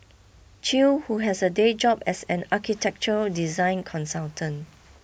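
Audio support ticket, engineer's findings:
Listened to the speech clip in full and found nothing to flag, so no faults to report on this one.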